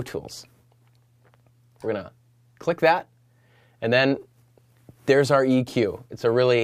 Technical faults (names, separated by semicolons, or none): none